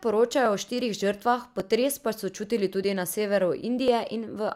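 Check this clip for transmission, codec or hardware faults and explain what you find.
One hardware fault shows up: clock drift buffer slips, likely caused by two devices running on separate, mismatched clocks, with a timing error on the order of 500 parts per million. The buffer between them slowly drifts until a small block of a few dozen samples is dropped or repeated. In this speech clip that happens at a steady 1.14 s interval, about four times between 0.46 s and 3.88 s, each slip heard as a brief click or pop in the speech.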